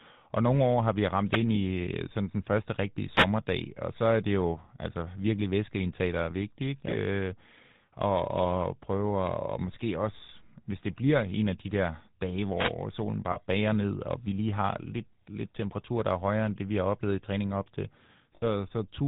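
Speech here, run through the GSM full-rate codec throughout, which fits the 13 kbps full-rate coder: nothing above 4 kHz and a plainly buzzy, gravelly roughness from its pulse-driven vocal-tract model. Right after "nogle år har vi" there's a wireless microphone noise hit from 1.27 to 1.41 s, a short static swish as the FM radio signal faded and receiver noise came up. There are also lost GSM frames at 13.32 to 13.38 s, just before "bager ned og vi", and at 18.36 to 18.44 s, after "i træning op til". Each is a brief rough, metallic held ring lasting 40 ms and 60 ms, which fits two and three dropped 20 ms frames patched by repeating the last good one.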